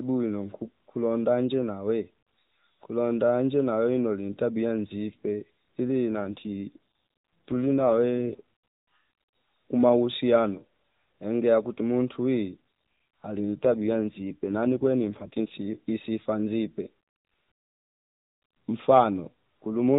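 Twice the link appears to force the AMR codec onto a lower rate to protect its bits, an AMR rate drop, from 6.12 to 8.41 s and from 13.40 to 15.57 s. The speech keeps its narrowband telephone bandwidth with no gap, but it turns rougher, buzzier and more synthetic, consistent with a step down from 12.2 to 5.9 kbps. Each time it recovers to the lighter coding of the normal AMR-NB path.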